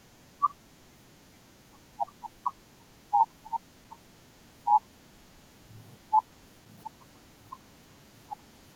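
Loose connector crackle at 3.83–3.90 s and 6.64–6.78 s: a worn contact repeatedly breaks and remakes the speech signal, producing brief irregular bursts of scratchy crackle.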